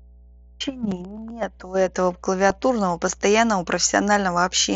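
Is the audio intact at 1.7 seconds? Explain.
No. Mains hum runs through the whole clip, including 1.7 s: a steady 60 Hz tone, from a ground loop or transformer coupling into the signal, sits well below the speech.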